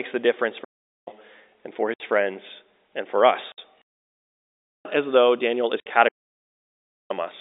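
From 0.64 to 1.08 s, between "the difference" and "and for", a digital wireless dropout mutes the speech for about 0.43 s. The link lost too much data, so the receiver faded to near silence. There is no noise burst on either side. On a waveform it is a flat gap with softly tapered edges, and on a spectrogram it is a clean blank column.

From 1.94 to 2.00 s, just after "and for" and before "friends and for", packet loss filled with silence cuts a 60 ms hole, which fits three 20 ms packets. Its edges are hard, which appear as vertical lines on a spectrogram. The same 60 ms hole recurs from 3.52 to 3.58 s, after "friends and for", and again from 5.80 to 5.86 s.

Longer wireless dropouts follow from 3.82 to 4.85 s and from 6.08 to 7.11 s, each muting about 1.0 s. The telephone-band G.711 coding keeps only about 300 to 3700 Hz, so the spectrogram stays empty above 4 kHz throughout.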